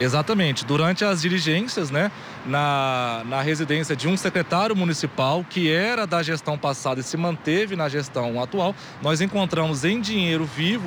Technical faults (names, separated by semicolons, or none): sample clock jitter